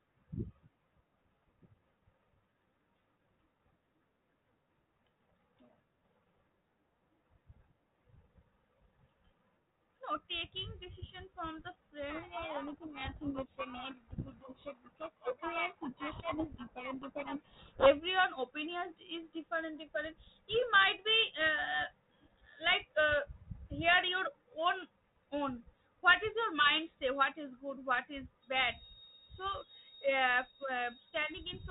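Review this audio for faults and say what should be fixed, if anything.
From 12.1 to 17.9 s there is a codec payload misread: the G.726 code words are unpacked in the wrong bit order, so the decoder reconstructs nonsense differences and the speech is buried in harsh, rasping distortion. On a spectrogram that span fills densely with noise up to the 4 kHz ceiling of the 32 kbit/s path, and the waveform turns thick and jagged. Both ends should be configured to agree on G.726 bit packing order.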